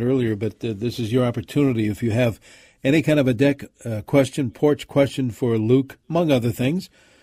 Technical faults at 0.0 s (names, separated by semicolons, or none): none